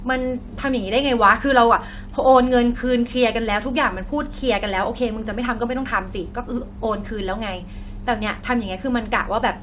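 No faults heard in this speech; the band stops at about 4 kHz, as expected from a narrowband call codec on the call path.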